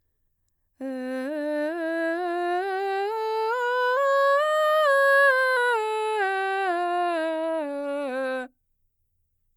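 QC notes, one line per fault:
3.97–5.57 s, drift correction step: the music plays 5.3% fast and about 89 cents sharp, then snaps back, likely from a clock-sync resampler rebalancing its buffer.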